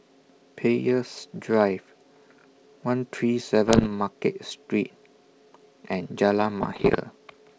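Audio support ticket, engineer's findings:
Bit errors on an ADPCM link: pops and rough bursts with brief level swings, 3.66 to 3.88 s and 6.63 to 6.99 s, on what sounds like G.722 at 64 kbit/s. Error rate somewhere around a percent. Each flipped bit corrupts the decoder's step size and predictor, so the disturbance rings on for milliseconds. Unlike packet loss, there are no gaps or concealment smear.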